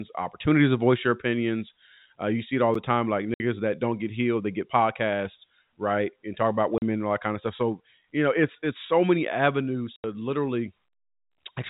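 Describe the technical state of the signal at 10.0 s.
At 10.0 s the speech drops out from 9.96 to 10.04 s, just after "it's so many avenues": packet loss filled with silence. The receiver substituted 80 ms of silence, which fits four 20 ms packets. The waveform shows a flat gap with abrupt edges, and the spectrogram shows a blank vertical band.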